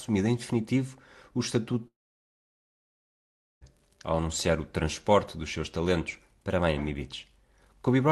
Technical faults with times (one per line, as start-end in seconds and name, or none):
1.87-3.64 long network dropout